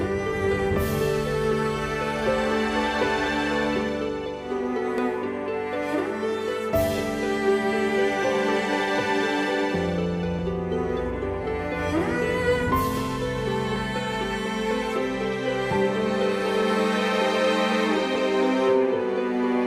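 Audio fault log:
4.98, 10.39, 13.76 and 18.16 s: dropped buffer (overrun), each heard as the sound jumping ahead. The likely cause is the program failing to collect samples before the hardware overwrote them, losing a stretch of roughly 30 ms at 4.98 and 18.16 s and about 10 ms at the other two, with no gap left behind. On the waveform each shows as an abrupt discontinuity with no silence; on the spectrogram, a thin full-height vertical line.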